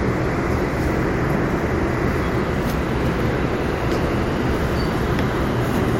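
Listening to this recording of sounds, nothing technical stood out as a problem.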